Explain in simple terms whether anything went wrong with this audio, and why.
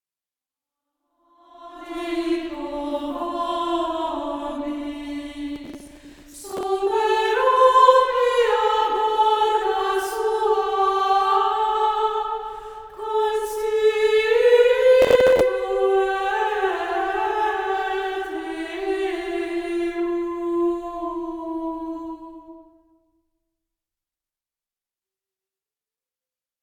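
Two bursts of processor overload crackle, from 5.56 to 6.63 s and from 15.02 to 15.41 s. The computer couldn't keep up, missing a string of tiny audio chunks, each around 10 ms. Each gap got patched with a snippet of old audio, and together those snippets make a gritty tearing sound.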